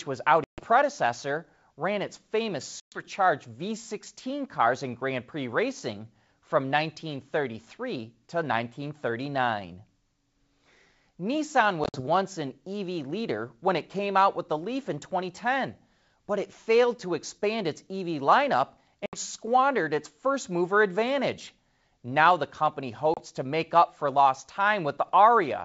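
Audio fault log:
0.44 to 0.61 s, 2.80 to 3.03 s, 11.84 to 12.01 s, 19.06 to 19.19 s, 23.14 to 23.21 s: packet loss on an ADPCM call. Holes of 140, 120, 80 (scattered, longest 50 ms), 70 and 30 ms drop to hard silence. Afterward the decoder's predictor and step size have drifted from the sender's, so the sound comes back with slight distortion until it resyncs.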